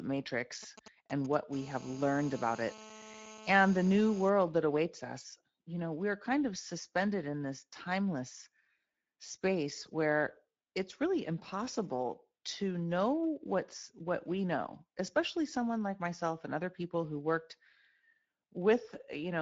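Speex codec coding runs through the whole recording at a setting that sounds like roughly 16.8 kbps. With too few bits for the excitation, the speech sounds plainly noisy and hoarse. Nothing survives above 7.7 kHz, and the top band is only a shaped, hissy fill.

From 0.63 to 1.35 s, GSM signalling bursts from a nearby 2G phone, which is not in a call, are rectified by the audio circuitry. They form a galloping dit-dit-dit of short 217 Hz buzzes, about 15 dB below the speech.

From 1.53 to 4.30 s, that phone is in a call and transmitting steadily. Its pulses, arriving 217 times a second, are rectified into a hard, raspy GSM phone buzz full of harmonics, about 17 dB below the speech. The buzz stops just before "that awaits us you".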